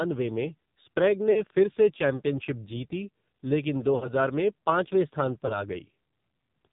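Throughout, the speech has passed through the AMR narrowband mobile codec at a low mode, which fits roughly 5.9 kbps. At that rate, each 20 ms frame describes the vocal tract with very few pulses, and the 8 kHz sampling removes everything above 4 kHz. The damage is heavy. The speech sounds muffled and boxy, with a buzzy, synthetic edge on vowels, and consonants lose their crispness.

At 1.32 s, after "में स्प्रेग", lost AMR speech frames fail their checks. The decoder reuses the last pitch and filter settings at falling gain for about 40 ms, which fits two missing frames. The sound smears into a brief warbling dip until 1.43 s and comes back a little rough before "फिर से चैंपियनशिप जीती". A longer gap follows "चैंपियनशिप जीती लेकिन दो" from 3.96 to 4.12 s, about 60 ms. Here the concealed sound stretches and sags toward silence before "में पांचवें स्थान". After "में पांचवें स्थान", a shorter loss at 5.46 to 5.61 s, about 20 ms of missing audio, leaves a quick wobble and a weak, grainy restart.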